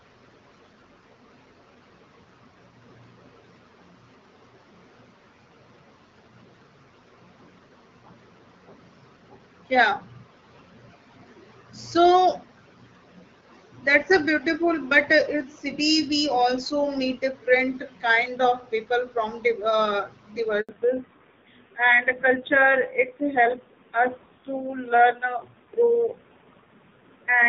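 Speech heard over a phone call drops out abruptly at 20.61 s and stays silent for 80 ms until 20.69 s. This is a handover gap: the call was passed from one network to another, no speech frames arrived during the switch, and whatever was said in that moment is lost. From 20.69 s to the end, the voice sounds duller and rougher, with nothing left above 4 kHz. This is a fallback to narrowband, where the call left HD Voice for an older narrowband codec, and the added raspiness fits a low rate of about 5.9 kbit/s. Before the break, the AMR wideband (HD Voice) codec carries the speech with only light coding damage, consistent with its 12.65 kbit/s mode.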